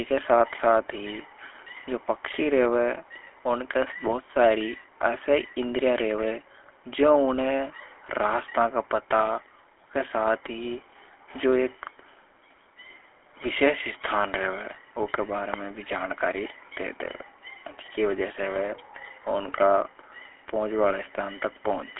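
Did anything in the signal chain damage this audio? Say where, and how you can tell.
Yes, at the codec stage: the whole speech clip has passed through the GSM full-rate codec, which fits a 13 kbps GSM full-rate link. A spectrogram shows nothing below 200 Hz or above 3.5 kHz, and the pulse-driven excitation model gives the plainly audible buzzy, gravelly roughness.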